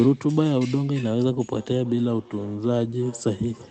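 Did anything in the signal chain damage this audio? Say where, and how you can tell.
Yes. A feedback echo between two devices escapes each echo canceller, returning the sound roughly every third of a second from 1.55 s onward, about 25 dB down.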